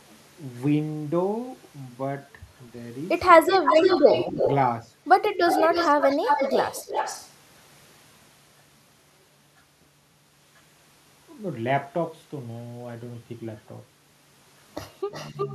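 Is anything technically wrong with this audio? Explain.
Yes, two related faults from a hands-free call are audible.

Echo leak occurs from 3.46 to 4.55 s, 5.46 to 7.31 s, and 15.11 s to the end. The likely cause is a far end on a loudspeaker whose echo canceller let part of its microphone pickup return down the line. A delayed duplicate of the speech follows it by 304, 315 and 358 ms. The first stretch is roughly as loud as the original, the second somewhat quieter, and the last clearly weaker.

Speech suppressed in double talk occurs from 4.04 to 4.37 s, 6.15 to 6.28 s, and 15.04 to 15.13 s, each overlapping an echo stretch. With both sides active, the canceller likely could not tell the near talker from the returning echo and attenuated everything. The speech dips by around 10 dB in the first two spots, for a fraction of a second, and by around 20 dB in a brief cut near the end.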